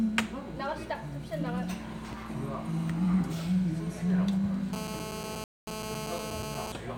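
GSM phone buzz from 4.73 to 6.72 s: a nearby 2G phone on a call pulses at 217 Hz, and the circuitry rectifies those bursts into a steady, raspy, harmonic-rich buzz about 6 dB below the sound. Rebuffering stall from 5.44 to 5.67 s: the player exhausted its downloaded audio, so everything drops to silence for 0.23 s, then resumes exactly where it stopped.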